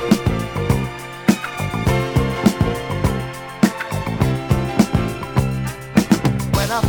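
No technical fault can be heard anywhere in this clip. Nothing in the audio stands out as broken or interrupted at any point.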